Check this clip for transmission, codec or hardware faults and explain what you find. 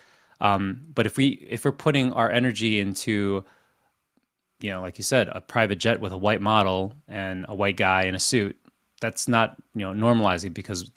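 Nothing stood out on listening to this speech recording.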